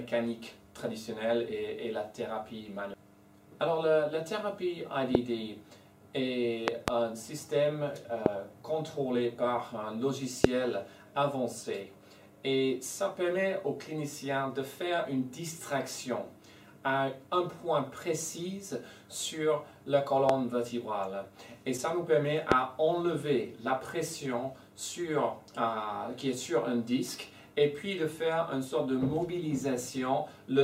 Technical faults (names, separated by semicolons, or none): loud pop